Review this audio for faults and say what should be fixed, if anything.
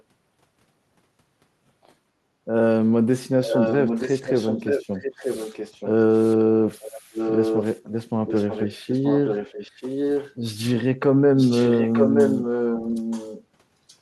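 Background gated by the echo canceller at 2.32 to 2.41 s: the room sound dips by about 7 dB for a brief moment while the canceller clamps the mic. Gentler suppression, or comfort noise during clamping, would keep it from ducking.

Echo leak at 3.46–5.89, 6.1–6.36, 6.81–7.8, 8.27–10.35, 11.36–13.44 and 13.88–13.96 s: a copy of the speech trails about 928 ms behind, mostly only about 5 dB under the speech, with faint bits at 6.1 and 13.88 s. Most likely a far-end loudspeaker whose canceller isn't fully removing the mic pickup. Headphones or a better-converged echo canceller on that end should sort it out.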